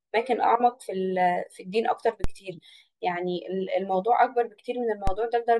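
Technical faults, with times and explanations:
2.24 s and 5.07 s, DC step: the waveform's zero line jumps abruptly by about -13 dBFS, as when a converter recalibrates or an input carrying an offset is switched in. A 5 Hz high-pass in the chain then pulls the offset back toward zero over a fraction of a second. Each sudden shift is heard as a low thump or click, while the speech itself carries on unchanged through both events.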